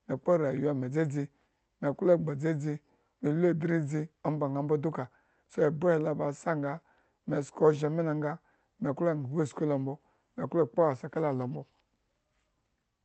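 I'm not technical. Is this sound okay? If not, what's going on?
Yes, the speech comes through intact with nothing going wrong, and it sounds like it was carried over an ordinary online call connection that keeps sound up to about 8 kHz.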